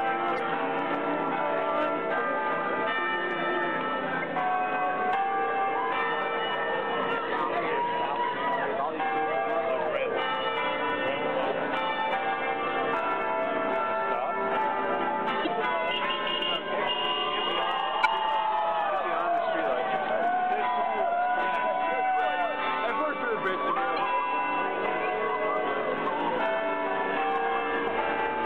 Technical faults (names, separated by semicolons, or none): damaged data in a compressed stream